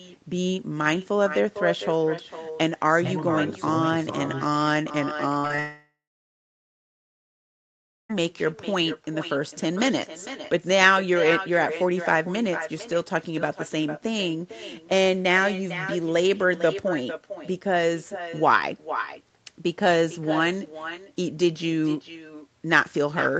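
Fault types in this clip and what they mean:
Echo with no canceller: every phrase returns about half a second later, about 11 dB quieter and thinner, because the far end's loudspeaker feeds its microphone unchecked.
Short concealed packet loss: brief smears or wobbles around 5.4 to 5.6 s, where the receiver papered over three gaps of 20 to 40 ms by extending the preceding sound.
Long network dropout: after a short fading buzz or hiss, the sound goes silent for about two seconds until 8.1 s, likely because no packets arrived for 2.5 s.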